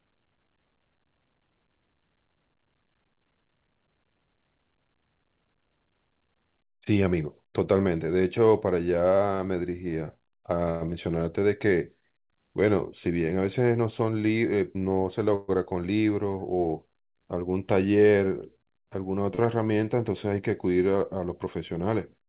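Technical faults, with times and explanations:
10.70–10.83 s: call audio freeze. The sound is held as a fading buzz for about 108 ms with nothing lost, so the rest arrives late by that amount. This likely comes from packets held up in transit until the jitter buffer ran dry.
10.91 s: short concealed packet loss. About 40 ms of audio never reached the decoder, and a brief continuation of the previous sound blends into what follows. The result is a quick smear or wobble, and whatever fell in the hole is gone.
11.12–11.41 s: jitter buffer slow-down. The receiver repeated single pitch periods and slivers of pause to rebuild its reserve, adding about 46 ms. The speech runs at 87% speed with pitch unchanged, so sounds are drawn out and may warble slightly.
13.68–14.83 s: jitter buffer speed-up. Excess buffered audio was trimmed by cutting out short pitch-period pieces, roughly 150 ms in total. 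The speech runs at 110% speed with its pitch intact, which makes this stretch sound hurried.
15.35–15.50 s: call audio freeze. A fading buzz fills about 130 ms before the speech carries on from where it paused, with nothing missing, only delayed. It likely comes from late packets emptying the jitter buffer.
19.35 s: short stall from a late packet. One packet came late, so the last sound is stretched for about 33 ms and then resumes from the same point. A syllable is held slightly too long, with a faint buzz, and nothing is lost.
Throughout, the call path cuts everything above 4 kHz, which fits a G.711 A-law codec at 64 kbps.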